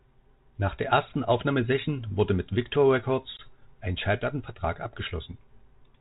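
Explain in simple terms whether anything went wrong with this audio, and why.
At 3.37 s the speech drops out in a sharp-edged gap of about 20 ms, then comes back slightly rough before settling. This is packet loss on an ADPCM call: a couple of data packets went missing, and the phone's decoder lost track of the sender until it resynchronised.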